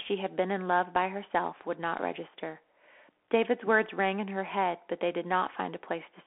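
Speech throughout sounds thin and boxy, held to a 300 Hz to 3.4 kHz band with nothing above 3.8 kHz. Its s sounds are scratchy over a granular hiss. This is a Bluetooth CVSD headset codec, whose one-bit up/down steps, fitting a 64 kbps link, cannot track fast high content.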